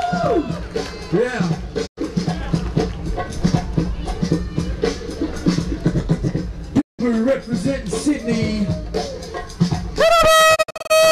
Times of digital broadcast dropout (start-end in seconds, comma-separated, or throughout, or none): 1.85-1.99, 6.80-7.01, 10.54-10.92